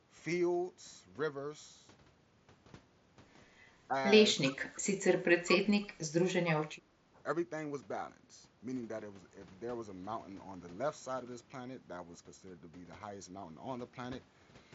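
The speech dips briefly by about 10 dB at 3.87–3.95 s and again, more gently (about 5 dB), at 4.41–4.56 s. Then it is pulled down hard, by up to about 30 dB, from 5.27 to 6.13 s, with one more 10 dB dip at 7.13–7.21 s. This is likely speech suppressed in double talk. The talker's own echo canceller, hearing both sides at once, turned everything down.

A faint delayed copy, about 20 dB below the speech and trailing by 310 ms, overlaps the dip at 4.43–4.56 s. A fainter scrap, about 30 dB down, follows at 4.74–4.81 s. The likely cause is echo leak: loudspeaker sound the echo canceller failed to remove was sent back.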